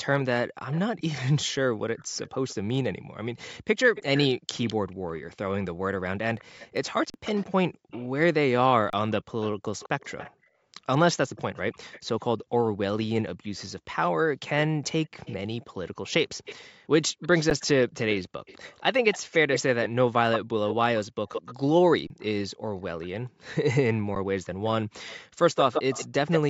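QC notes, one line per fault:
0.71–2.55, 3.60–4.74, 6.39–8.08, 9.41–10.31, 11.36–12.45, 13.43–13.63, 15.04–23.76 and 25.07–26.40 s: echo leak. There's a delayed ghost copy of the speech trailing behind it, about 206 ms late in the first six stretches and about 168 ms late in the last two. It's faint early on, around 20 dB down, but builds to only about 5 to 10 dB below the speech from 15 s on. Likely a loudspeaker on the other end with an echo canceller letting some through.
7.10–7.14, 8.90–8.93, 17.50, 22.07–22.10 and 24.15 s: underrun with held sample. Each time the output buffer runs dry and the converter just holds its last value, so the waveform flattens out for about 40, 30, 10, 30 and 10 ms. The sound drops out with no click as it stops, and that stretch of live audio is gone, so the playback jumps ahead when it comes back.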